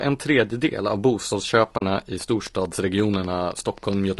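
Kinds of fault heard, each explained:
Low-delay AAC compression: Speech likely went through a low-delay AAC codec at a bitrate that sounds near 32 kbps, leaving the voice plainly rough and grainy throughout.
AAC frame loss with muting: The decoder lost audio and zeroed it, consistent with two dropped frames, leaving a soft-edged 40 ms hole in the speech at 1.77 s.
Train of clicks: Pulses, likely from interference or a faulty connection, tick irregularly at about seven per second, around fifteen in all, from 2.21 to 3.94 s.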